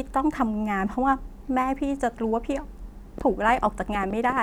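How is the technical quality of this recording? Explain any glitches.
The recording has one clear glitch near the end. From 3.18 to 4.38 s, a train of clicks appears, likely from interference or a faulty connection injecting pulses. Around 15 similar clicks arrive unevenly, about 11 per second, and they pop out roughly 5 dB above the speech.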